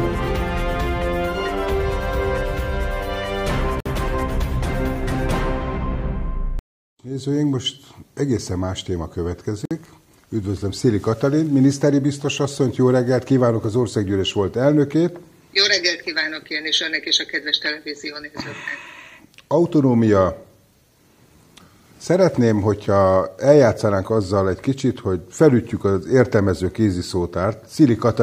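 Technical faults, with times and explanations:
3.80–3.86 s and 9.65–9.71 s, gap at a join of encoded pieces: the continuous sound drops into silence for about 54 ms each time, then resumes exactly where it stopped, with nothing lost. The audio was encoded as separate pieces and joined without trimming, so each join keeps the encoder's start-up delay and the padding from the previous piece's last frame. The codec smears the edges, so the fully silent part is shorter than the gap.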